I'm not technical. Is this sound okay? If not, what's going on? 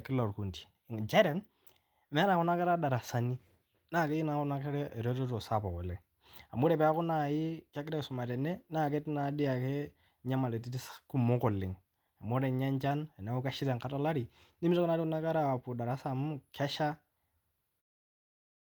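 Yes, nothing stood out as a problem when listening to this recording.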